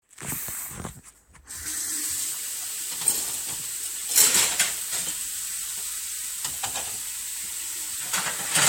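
No technical faults can be heard in this recording of sounds. Nothing in the audio points to a problem in how it was captured, processed or delivered.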